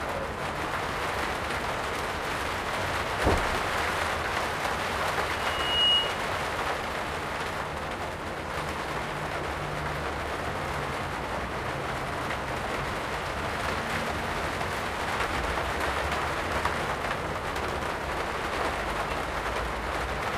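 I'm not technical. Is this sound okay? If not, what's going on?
No. From 5.34 to 6.28 s there is loudspeaker feedback squeal: a microphone picks up its own speaker, and one pitch, around 2.9 kHz, feeds on itself. Unlike a steady whistle, it swells up over about half a second into a piercing squeal.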